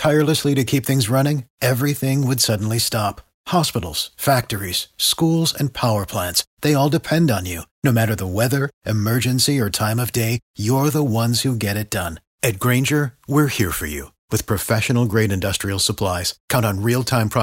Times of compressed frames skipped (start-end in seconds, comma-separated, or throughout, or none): none